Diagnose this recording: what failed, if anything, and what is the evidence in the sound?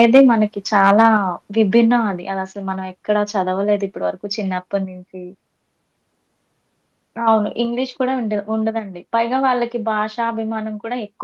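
Microphone overload shows at the converter stage. From 0.00 to 0.22 s, the speech peaks flatten and pick up a harsh, crackling edge. The input runs about 4 dB past full scale there, and a small but audible share of samples are squared off. A milder burst follows from 0.85 to 1.06 s, about 2 dB over, with fewer samples clipped. The likely cause is a microphone input volume set too high.

Microphone volume stepped down in the call processing. At 0.17 s, right inside the first distorted stretch, the speech and background both drop by about 2 dB at once. At 1.17 s, shortly after the second overload, they fall again by about 4 dB. Each change is a single abrupt step, not a smooth fade. This likely comes from the call software's gain control reacting to the clipping and cutting the device's input level.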